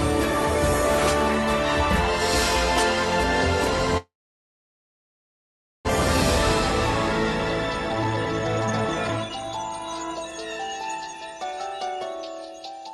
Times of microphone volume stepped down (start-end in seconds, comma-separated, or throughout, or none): none